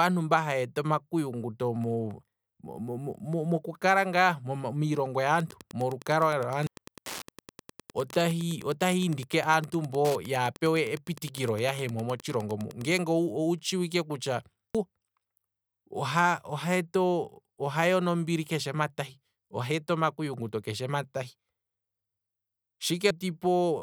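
From 5.38 to 13.00 s a nearby Wi-Fi radio is picked up and rectified by the audio circuit as Wi-Fi interference: a steady tick every 102.4 ms, about ten a second, sitting roughly 20 dB below the speech, ending just before "owu tshiwike kutya". At 6.67, 14.75 (right after "owu tshiwike kutya") and 23.11 s, compressed frames are skipped. Whole frames, which fit a length of about 93 ms, go unplayed, so the speech jumps ahead by three or four tenths of a second.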